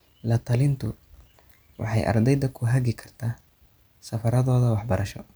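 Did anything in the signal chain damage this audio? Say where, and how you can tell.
No, nothing in the chain left an audible mark on this speech recording: level, continuity and timing all hold steady from the first moment to the last.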